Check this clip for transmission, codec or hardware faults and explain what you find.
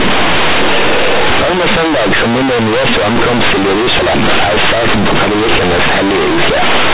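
There is one fault, and it runs through the whole clip: companded audio read as linear. The speech was encoded as mu-law, and the telephone coding itself, with its 8 kHz sampling and nothing above 4 kHz, is intact. At playback, however, those mu-law bytes are treated as plain linear 8-bit samples with no expansion step. Because mu-law stores sign and logarithmic magnitude, every sign change throws the output across roughly half its range, and quiet passages come out as loud as peaks. The result is a harsh, buzzy, heavily distorted sound that is very loud, with pauses filled by strong noise instead of near-silence.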